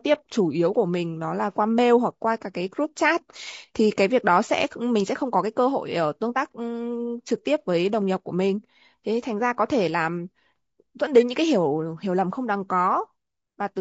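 Across the whole speech clip the voice sounds rough and grainy, with a hiss filling the gaps between harmonics and a thin, synthetic top band. This is likely low-delay AAC compression, where short frames blur pitch detail, at a rate that suggests about 32 kbps.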